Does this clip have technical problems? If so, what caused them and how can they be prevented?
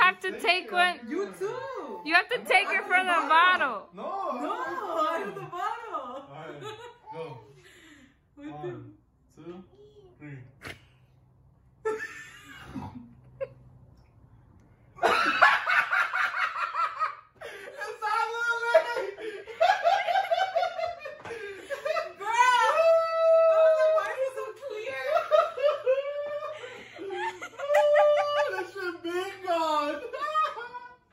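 Yes: a bit error spike at 24.06 s, a single sharp tick peaking at about -26 dBFS. One flipped bit in memory or on a digital link shifted three consecutive samples by a power-of-two step before they snapped back, so the tick is broadband and has no relation to the surrounding audio. Unlike a dropout click, no sound goes missing around it. Error-checked transfers, ECC memory and sound cabling prevent it.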